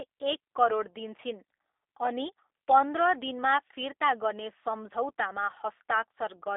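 G.729 codec coding runs from start to end of this speech. The encoder rebuilds each 10 ms frame from a vocal tract filter, a pitch predictor and a handful of pulses, a parametric squeeze that fits an 8 kbit/s VoIP link. The damage is plainly audible: voiced sounds take on a rough, synthetic edge. The line band spans 300 Hz to 3.6 kHz, and nothing above 3.7 kHz survives, leaving the sound narrow and muffled.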